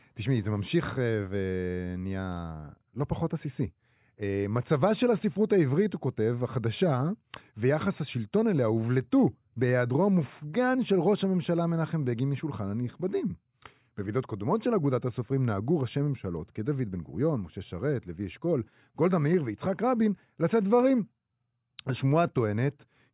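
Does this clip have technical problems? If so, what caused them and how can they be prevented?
No, this clip has no technical problems, so there is nothing to prevent.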